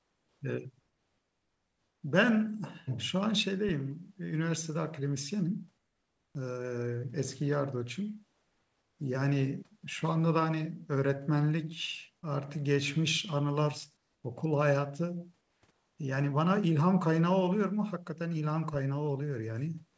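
It's a speech clip where the pauses at 0–0.41, 0.80–2.03, 5.78–6.35, 8.33–8.99, 13.97–14.24, 15.41–15.62 and 15.71–15.98 s go flat and about 3–6 dB quieter, likely comfort noise in place of the background from discontinuous transmission.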